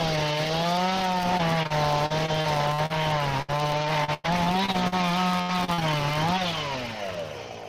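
From start to finish, a filter restarted on every block leaves a buzz at 100 Hz. The filter drops its internal state at each block boundary and begins again from silence, so every block opens with a small click. Repeating every 10 ms, which fits a 10 ms processing block, those clicks merge into a steady buzz whose loudness rises and falls with the level of the sound.

From 1.37 to 2.92 s comes the first burst of repeated packet loss, heard as robotic sound. Chunks of audio go missing in quick succession, and each hole is patched by stretching out the sound just before it, giving a choppy texture. About 240 ms is lost here, the longest single gap lasting 40 ms. A second burst runs from 3.42 to 4.94 s, with about 320 ms lost and one gap reaching 101 ms. A shorter third burst from 5.42 to 5.83 s is the densest, with roughly a third of that stretch patched over and its longest gap at 67 ms.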